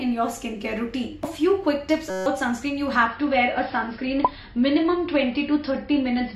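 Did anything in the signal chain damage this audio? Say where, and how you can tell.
Yes. At the driver or buffer stage there is a system hang loop from 2.10 to 2.26 s: a 5.33 ms slice repeats about 30 times, giving a steady 188 Hz buzz. That fits a 256-sample ring buffer replaying while the system stalled, and roughly 150 ms of audio is lost.

At the network stage, from 3.06 s to the end, the audio switches abruptly, with no gap, to an adaptive stream at a lower bitrate. Nothing survives above 5.5 kHz and codec artefacts thicken, which points to the player dropping to a much lower-bitrate AAC version when throughput fell.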